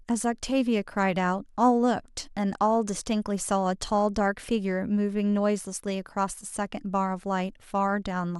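No technical faults can be heard anywhere in the speech.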